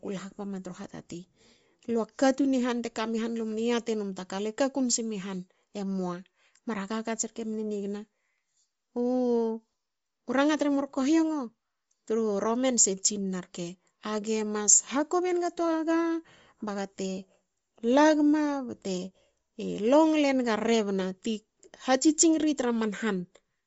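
Across the whole speech clip, nothing survives above about 7.7 kHz, and the upper band carries a breathy, grainy noise texture with plainly audible codec damage. This is likely Bluetooth LC3 compression, consistent with 10 ms frames at around 32 kbps, zeroing and noise-filling the upper spectrum.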